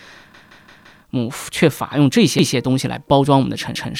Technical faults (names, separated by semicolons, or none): repeated buffer